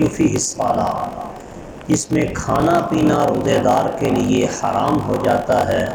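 A block size mismatch (padded) runs through the whole clip. One stage writes shorter blocks than a 1024-sample read expects, and zeros fill the remainder, so a gap recurs in every block. This produces a 46.9 Hz buzz and slows the audio to 0.861 times its original speed.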